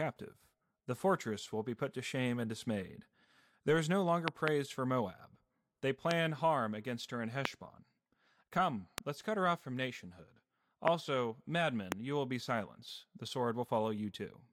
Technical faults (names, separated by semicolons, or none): loud pop